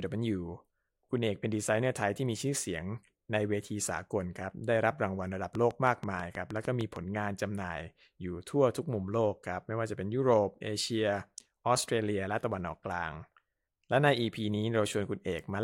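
From 5.55 s to 6.97 s, a train of clicks runs over the speech. About ten sharp pulses arrive at a steady 6.4 per second, each with much the same shape. They sound like a regular ticking or popping laid on top of the sound, clearly audible in gaps as well. The clicks peak around 10 dB above the speech, so they stand out. The likely cause is electrical interference from nearby equipment or a faulty connection or power supply.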